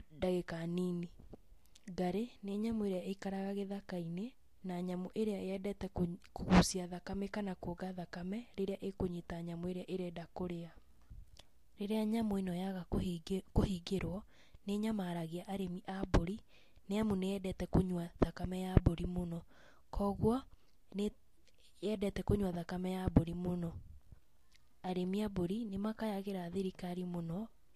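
From start to finish the speech carries the smeared, watery texture of a heavily squeezed lossy encode, even though the file itself sits at a generous rate. That's low-bitrate audio saved at a high bitrate: the sound points to an earlier pass through something like Vorbis at around 46 kbit/s, likely later re-encoded to MP3 at 256 kbit/s. The second encode can't put back what the first threw away, so the damage simply rides along, with almost nothing new added.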